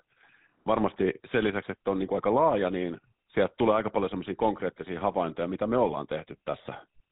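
A buzzy, gravelly roughness runs through this speech clip from start to finish, the signature of the GSM full-rate codec. Its damage is plainly audible and the sound fits a 13 kbps coding. The codec rebuilds each voice from a vocal-tract model fed by sparse, regularly spaced excitation pulses, which produces the grating texture. On a spectrogram, energy stops dead near 4 kHz, and harmonics look smeared and coarse below that ceiling.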